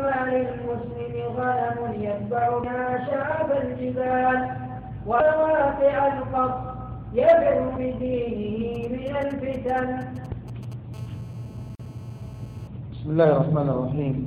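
From 8.75 to 10.74 s, GSM signalling bursts intrude. A nearby 2G phone sends short radio bursts, which the audio circuit rectifies. They gallop as brief 217 Hz buzzes, roughly 25 dB below the sound.

From 10.94 to 12.68 s, a steady GSM phone buzz follows. The phone is transmitting continuously now, pulsing at 217 Hz. The result is a hard, raspy buzz, about 30 dB down.

At 11.75 s, during that buzz, a 43 ms gap at a join of encoded pieces opens. Separately encoded segments were spliced untrimmed. The sound drops out, its edges smeared, then resumes where it stopped.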